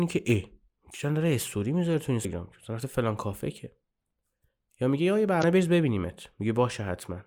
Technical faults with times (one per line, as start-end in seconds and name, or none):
2.24 damaged data in a compressed stream
5.40-5.44 damaged data in a compressed stream